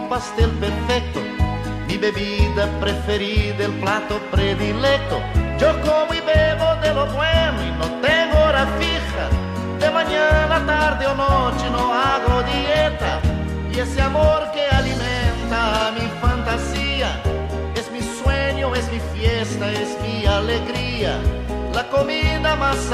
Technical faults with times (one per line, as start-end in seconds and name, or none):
1.72-2.84 filter restarted on every block